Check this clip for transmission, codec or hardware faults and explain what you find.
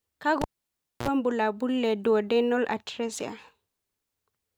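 One hardware fault is present. Cable pulled and plugged in, 0.42 to 1.08 s: the live lead comes out with a pop, leaving 0.62 s of near silence. As the plug goes back in, its tip alone picks up a 55 ms burst of 60 Hz mains buzz, then a second pop restores the speech.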